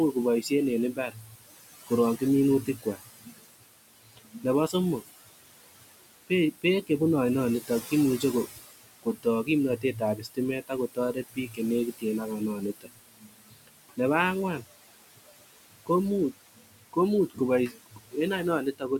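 The noise suppressor is working throughout, treating every band it judges to be steady noise as something to remove and lowering it by about 19 dB frame by frame. The room noise, about 14 dB below the speech, drops away in pauses and returns beneath the voice.

The same noise suppressor also cuts speech. From 0.13 to 6.9 s and from 7.61 to 13.99 s, it mistakes quieter parts of the speech for noise, pulling them down by as much as about 22 dB, for around two seconds in total in each stretch. It does so again from 14.59 to 18.99 s, for about a second and a half. Soft consonants and word endings sound swallowed or faint.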